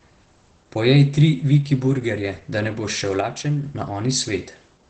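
Opus voice compression runs throughout this speech clip. The coder's linear-prediction model rebuilds the speech from a coarsely coded excitation, leaving it muffled, slightly hoarse and a little robotic, with nothing above 8.8 kHz. The wideband SILK character fits a bitrate near 12 kbps.

One channel drops out from 3.21 to 3.63 s, right after "da ne boš šel". The level falls abruptly by about 6 dB and then returns, most likely because one stereo side went silent and the mono sum lost half its shared signal.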